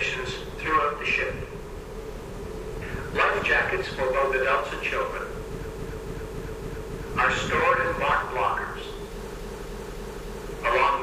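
At 5.62 s to 7.02 s, repeated frames: the same 0.28 s block plays five extra times, a stutter. At 9.34 s to 10.45 s it recurs four times. The block length fits six frames resent.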